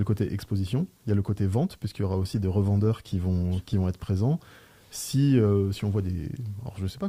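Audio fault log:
2.23–3.85 s call bitrate drop: encoder rate falls from about 64 to 19 kbps for roughly 1.6 s, coarser coding and lost highs make it rough and muffled.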